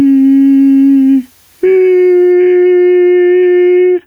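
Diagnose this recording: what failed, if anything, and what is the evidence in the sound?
Throughout the music the level breathes, the gain swinging by something like 10 dB, and loud and soft parts sit squashed close together. This is gain pumping, most likely from input gain set far too high for the microphone at the analogue front end, with a fast limiter or compressor yanking the level down on each peak and releasing it in the quieter moments.

From 0.0 to 2.32 s a steady, even hiss sits under the music, roughly 45 dB below it, with no grit or distortion on the tones themselves. That points to low bit depth with dither at a sample-format conversion stage, consistent with about 9-bit resolution. Dither added before rounding turns the coarse quantisation error into flat white noise, so the reduced resolution is heard as hiss until it stops at 2.32 s.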